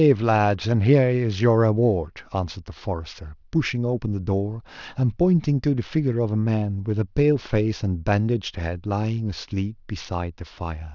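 Speech recording with aliasing throughout: the audio was downsampled without an anti-aliasing filter, and the band edge at 6 kHz points to a 12 kHz rate. Content above that edge folds back as false tones roughly 30 dB down, leaving sibilants gritty and metallic.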